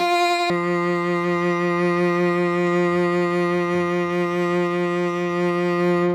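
From 0.0 to 0.5 s the music runs at 2x speed and 12 semitones higher, an octave up. This is audio read two samples at a time: each pair is taken as one frame. Unlike a pure pitch shift, the tempo doubles too.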